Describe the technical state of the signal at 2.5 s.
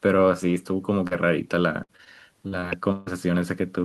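Short concealed packet loss at 2.48–2.54 s and 2.60–2.64 s: about 40 and 20 ms were rebuilt from the preceding sound, heard as a brief smear rather than a silent gap.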